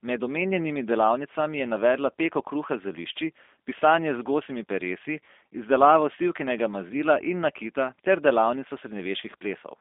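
From start to finish, the speech carries G.729 codec damage. The codec does not store the waveform. It rebuilds each 10 ms frame from a vocal tract filter, a pitch predictor and a few pulses. That sparse rebuild, which fits an 8 kbit/s stream, makes the speech plainly rough and synthetic. The line band runs from 250 Hz to 3.6 kHz. Nothing passes above 3.7 kHz, so the sound is thin and dull.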